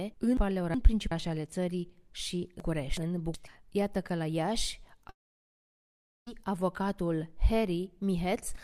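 The audio gets jumbled twice, from 0.37 to 1.12 s and again from 2.60 to 3.34 s. Both are chunks out of order: a roughly 0.37 s block lands one slot late, so the sequence scrambles at the hard joins. Then from 5.09 to 6.28 s the sound cuts to a brief fading buzz and then near silence for about 1.1 s before resuming further along, with that stretch simply gone. That's likely a long network dropout, with the receiver briefly padding the gap.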